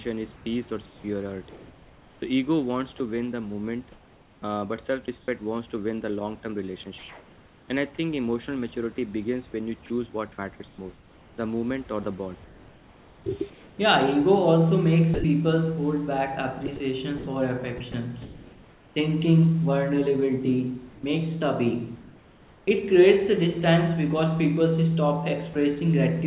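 Speech, band-limited to about 4 kHz in a way that fits a G.711 call codec, with sound chopped by the voice detector from 0.36 to 11.38 s and again from 13.5 to 22.67 s. Quiet syllables and word edges repeatedly give way to comfort noise, about 2.2 s and 1.5 s in total. This is likely the sender's detector toggling on and off. At 25.53 s a separate single dropout, sound dropped by the voice detector, briefly replaces the speech with steady noise before it resumes. A likely single detector decision causes this one isolated gap, which sets it apart from the repeated switching of the two earlier stretches.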